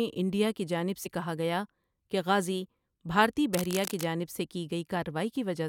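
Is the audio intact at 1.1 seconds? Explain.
No. Just before that point, at 1.05 s, between "انڈیا کی جانب" and "کہا گیا کہ غازی", compressed frames were skipped. Whole frames went missing or were rejected by the decoder, so roughly 50 ms of speech vanishes. A spectrogram shows a vertical seam where harmonic tracks jump abruptly, and the waveform shows a discontinuity.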